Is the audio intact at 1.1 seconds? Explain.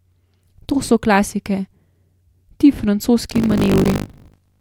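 Yes, the speech at 1.1 seconds is intact, with no dropout, click, distortion or other fault at that moment.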